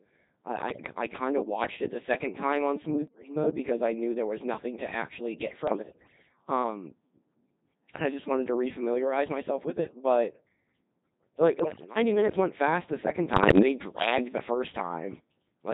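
Throughout, the speech passes through the Codec 2 vocoder at 2.4 kbit/s, heavily robotic and buzzy because it is rebuilt from pitch and envelope parameters, not waveform-coded. Bit errors on digital voice radio corrupt whole frames into pitch and level jumps, warbles and bleeps rather than silent dropouts, at 0.68–0.86 s, 3.08–3.36 s (between "the second time on" and "mode because I knew"), 5.68–6.29 s (after "nothing to actually get"), 11.6–11.96 s (before "minutes went fast the") and 13.34–13.62 s.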